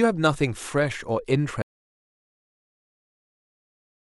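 The audio input was likely lost, through a disconnected device, failed link or stray mute, while the recorder kept writing silence, so this speech clip suffers an audio dropout to silence: at 1.62 s the sound cuts off mid-flow into dead silence, with no room tone, lasting to the end.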